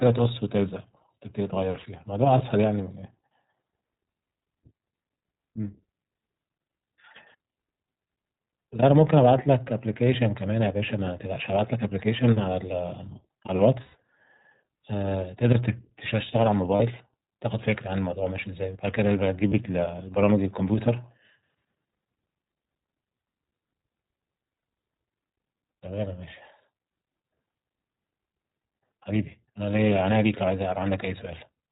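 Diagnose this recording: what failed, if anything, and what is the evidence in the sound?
At the codec stage, the whole speech recording passes through the iLBC codec. Nothing survives above 4 kHz, and the voice has a plainly rough, synthetic edge, which fits iLBC's 15.2 kbps mode with 20 ms frames. A spectrogram shows a hard ceiling at 4 kHz.

At the network stage, lost iLBC frames occur at 2.38 to 2.41 s (20 ms), 13.82 to 13.95 s (120 ms), 16.76 to 16.82 s (40 ms) and 19.48 to 19.54 s (40 ms). The decoder repeats the last pitch cycle with noise, so each gap sounds like a held, buzzy vowel that fades during the long one. Speech recovers immediately afterwards. The waveform shows repeated pitch cycles, and the spectrogram shows flat, frozen harmonics.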